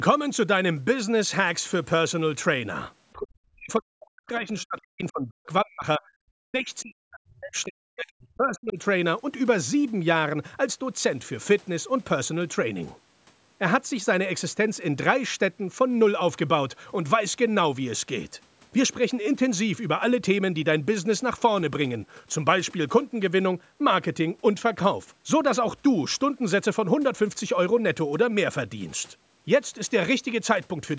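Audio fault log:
3.13–8.78 s, speech suppressed in double talk: the speech dips and breaks up, at worst by roughly 40 dB, likely from the echo canceller treating overlapping talk as echo.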